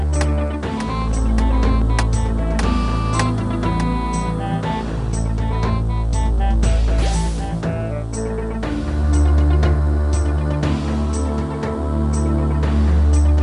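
Something in the chain, likely interference from nearby equipment or a faulty connection or power supply, is injecting short pulses into the signal from 0.02 s to 2.40 s. The result is a train of clicks: about fifteen near-identical pops, roughly as loud as the sound itself, at around 5 per second but unevenly spaced. They tick over the sound and through its pauses alike in the opening couple of seconds.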